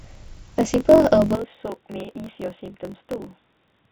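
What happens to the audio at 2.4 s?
At 2.4 s the speech sits inside an input switched to a poorer device. From 1.35 s to the end, the band is narrower. The sound turns dull and drops roughly 10 dB, with no gap at the switch. A change to a narrower microphone or headset profile is the likely cause.

A block size mismatch (truncated) also runs through the whole clip. One stage writes longer blocks than the next reads, and each block's tail is dropped. This fits 1024-sample blocks. It is heard as a 45.9 Hz buzz, with speech running 1.07 times fast.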